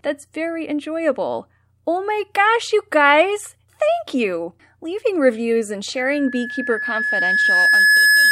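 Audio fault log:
5.97–8.31 s, loudspeaker feedback squeal: a single steady tone near 1.7 kHz rises out of the speech, swelling over roughly two seconds until it sits about 5 dB above the talker and runs to the end of the clip without being cut off. The microphone is hearing the loudspeaker it drives, and around 1.7 kHz the round trip through that loop gains more than it loses, so the tone keeps feeding itself and grows until something limits it.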